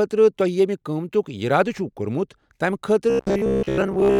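From 3.10 s to the end at 4.20 s, the speech turns robotic. The voice becomes a rigid, metallic buzz pitched at 66.7 Hz. It still follows the shape of the words loosely. This is likely robotic sound from repeated short buffers. Fresh audio arrived too slowly, so the same slice of about 15 ms was played over and over. That period sets the fixed buzz. Most of the real audio in this stretch is skipped.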